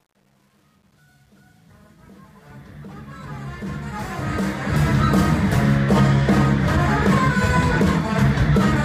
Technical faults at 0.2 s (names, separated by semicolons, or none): truncation distortion on a fade